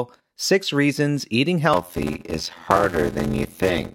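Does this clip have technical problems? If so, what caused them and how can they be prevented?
Yes. A block size mismatch (padded) runs from 1.73 s to the end. One stage writes shorter blocks than the next reads and fills the remainder with silence. That produces an 86.1 Hz buzz, which fits a 512-sample read block, and slows the speech to 0.625 times normal speed at about its usual pitch. To prevent it, make both stages use the same block size, or buffer the output so full blocks are always delivered.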